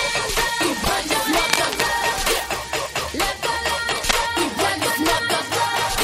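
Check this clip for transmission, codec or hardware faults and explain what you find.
Two kinds of fault are present: a short repeated-frames stutter and two bursts of cable scratch noise.

Repeated frames, 0.83 to 0.89 s: one 24 ms block, which fits a single compressed frame, plays a second time, adding 24 ms. It sounds like a tiny stutter. In the waveform a short segment repeats exactly.

Cable scratch noise, 1.44 to 1.81 s and 3.89 to 4.11 s: dense, uneven crackling rustle sits only a little below the sound's level. It likely comes from a worn cable or connector being moved, with its contact resistance fluctuating. A spectrogram shows ragged broadband vertical speckle in these spans, and the waveform shows irregular spiky bursts.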